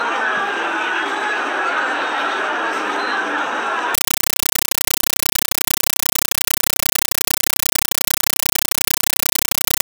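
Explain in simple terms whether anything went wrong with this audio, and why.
At about 3.95 s, a compressed stream is played as audio: a Dolby Digital signal reaches the output undecoded and is treated as ordinary sound. From there to the end, the sound is replaced by loud, harsh static that chatters in 8 ms bursts, about 31 per second.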